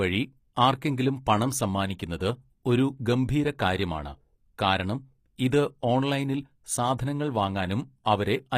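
Throughout the speech, codec damage is plainly audible, and nothing is present above 15.5 kHz. The likely cause is HE-AAC compression. This codec keeps only the lower spectrum as real signal. It rebuilds the treble by copying lower bands upward and shaping them with a coarse envelope. The rebuilt harmonics do not align with the real ones across the crossover. So s sounds come out gritty, metallic or lispy. The damage fits a low bitrate near 24 kbps.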